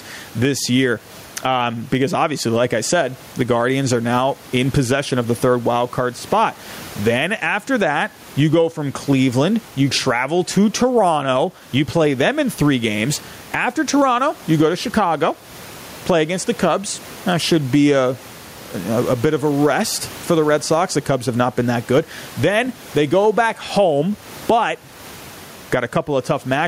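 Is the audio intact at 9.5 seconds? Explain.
No. Throughout the clip, including at 9.5 s, there is gain pumping, likely from input gain set far too high with a fast limiter or compressor clamping it on each loud syllable. The room noise is about 33 dB below the speech, and the gain swings by around 15 dB, leaving the level squashed.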